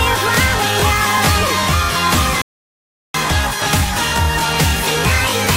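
At 2.42 s the sound drops abruptly into silence, then picks up again at 3.14 s from exactly the point where it broke off. This is a rebuffering stall: playback exhausted its downloaded audio and waited for more, inserting about 0.73 s without losing anything.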